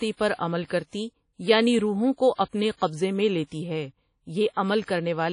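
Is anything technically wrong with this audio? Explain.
Yes. Throughout the speech there is plainly audible codec damage, likely from WMA compression. Everything above 10.1 kHz is missing, with a hard shelf on a spectrogram, and a washy, ringing hiss breathes with the sound. The transform blocks' quantisation noise smears across tens of milliseconds, consistent with a bitrate around 32 kbps.

From 4.53 to 4.57 s there is pre-echo. A sharp attack falls late in a transform block, so noise sized for the loud part also fills the quiet moment before it. You hear a brief hiss leading into a softened onset. On a waveform or spectrogram, a noise smear precedes the transient by about 38 ms.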